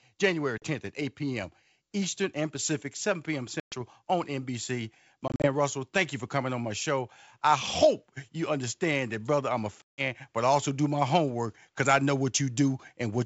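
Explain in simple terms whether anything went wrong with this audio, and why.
The speech drops out abruptly four times, at 0.58 s, 3.60 s, 5.28 s and 9.83 s, leaving hard-edged gaps. After each gap the speech comes back briefly a little rough. This is packet loss on an ADPCM call, here a G.722 wideband call. A few chunks of audio never arrived and were replaced by silence, from about 40 ms up to 160 ms. The gap between "that brother I'm a" and "but I also do" is the longest. The gap at 5.28 s is several short holes scattered over about 160 ms.

The roughness comes from how this kind of audio coding works. Each sample is sent only as a change from a prediction, so the receiver must keep its running estimate matched to the sender's. A missing chunk knocks the two out of step. The receiver then takes a few tens of milliseconds to catch up.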